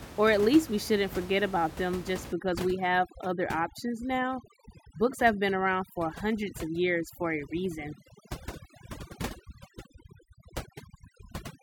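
Overdone noise removal runs from 2.33 s to the end. Set too strong against room noise about 14 dB below the speech, it cuts any band near its noise estimate and takes quiet speech with it. The background in the pauses drops and breaks up into twinkling specks.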